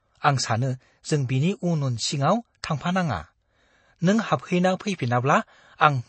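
The clip is speech, and the whole of it carries MP3 compression damage. The damage is plainly audible. Nothing is left above 8.3 kHz, so the top end sounds dull and boxed in. The likely cause is an MP3 encode at a very low rate, which fits about 32 kbps. Short of bits, the encoder cut the treble at a fixed point and discarded weak frequency detail. That detail flickers in and out between frames, giving the sound a watery, swirling edge. Sibilants turn metallic and consonant onsets blur. There is also a pre-echo at 2.62 s, just after "उन सिङाव". A hiss, about 17 ms long, runs ahead of a sharp attack. The codec spread its coding noise across a whole block. Noise meant for the loud onset also filled the quiet moment before it. As a result, that attack sounds softened and smeared.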